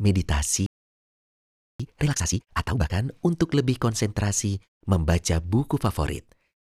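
At 0.66 s the speech cuts out into a playback stall lasting about 1.13 s, likely the player starving for data; the waveform shows a flat, empty gap. From 1.80 to 2.92 s, time-compressed catch-up plays the backlog at twice normal speed but unchanged pitch, hurried, with tightly packed syllables on the spectrogram, just before "untuk lebih konsentrasi membaca".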